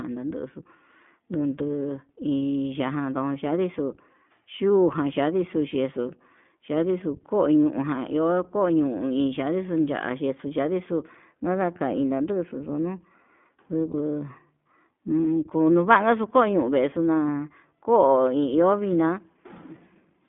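From start to finish, the speech carries the sound of the iLBC codec. The line is confined to roughly 150 Hz to 3.5 kHz, which fits narrowband telephony. The codec damage is plainly audible as a rough, slightly synthetic edge, consistent with the 15.2 kbps, 20 ms frame mode. That texture sets it apart from simple band-limiting, which would only sound muffled.

From 13.92 to 13.96 s there is a lost iLBC frame, which fits a single missing 20 ms packet. The decoder fills the hole by repeating the last pitch cycle mixed with noise, so it sounds like a brief buzzy, held vowel rather than a silent dropout or click. The normal voice returns immediately afterwards.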